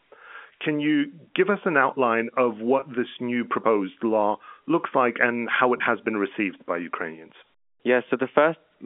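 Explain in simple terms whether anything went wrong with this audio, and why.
Yes, two brief dropouts can be heard. Each is packet loss with pitch repetition. About 20 ms of sound went missing, which points to one lost packet each time. The receiver filled the gap by repeating the last cycle of the voice. The first comes at 2.80 to 2.82 s, after "us an outline of". The second comes at 5.78 to 5.80 s, after "looks like and how". Each sounds like a tiny held, buzzy blip. The narrow telephone sound comes from G.711 phone coding.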